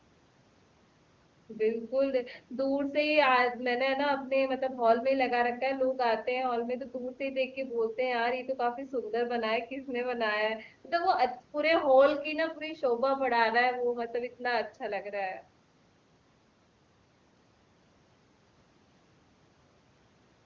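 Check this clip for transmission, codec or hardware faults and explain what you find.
Nothing here points to a transmission, codec or hardware fault; the speech comes through the call's usual microphone processing and HD Voice link with the top of the band stopping around 8 kHz, just as that path should.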